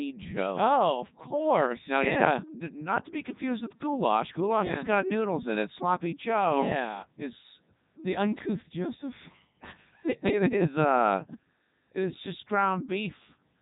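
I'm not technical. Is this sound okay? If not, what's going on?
No, it isn't. The whole clip has passed through a Codec 2 vocoder, a digital-radio voice squeezer that keeps only rough pitch and tone and rebuilds the speech from pure tones. The speech comes out heavily robotic and buzzy, with nothing above 3.8 kHz.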